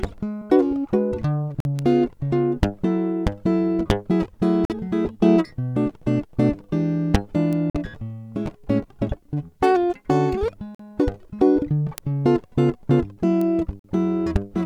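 At 0.41 s the music lurches forward. Compressed frames were skipped: about two 20 ms frames, roughly 40 ms of music, never reached the output, either missing from the stream or rejected by the decoder as corrupt. The music simply resumes slightly further on. The same happens at 5.05 s, where about one frame's worth, around 20 ms, is lost.

At 1.60 s the first gap between chunks appears: a hole of about 48 ms with abrupt edges. It recurs at 4.65, 7.70, 10.75 and 13.79 s, about every 3.05 s, which points to the audio being delivered in 3-second chunks with each one starting late. Unlike the frame skips, nothing is removed. The music halts and picks up where it stopped. The strict spacing and clean silent edges also set these apart from the irregular skips.

A bit error spike occurs at 1.79 s, where a flipped bit threw a short run of samples, which fits about three, far off their true value before they snapped back. 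Further single-sample spikes follow at 7.53, 11.98 and 13.41 s. Each is a sharp, broadband tick with no relation to the music. It is far shorter and more abrupt than the frame-skip jumps, and no music is lost or paused around it.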